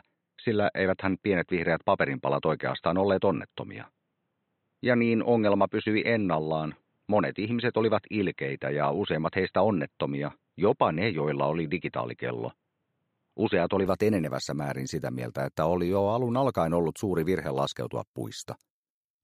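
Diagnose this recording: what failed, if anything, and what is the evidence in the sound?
From the start to 13.86 s the sound is dull and boxy with nothing above 4 kHz, then clears abruptly with no gap or level jump. This points to a driver-stage input switched to a poorer device, likely a headset profile, rather than a codec narrowing bandwidth.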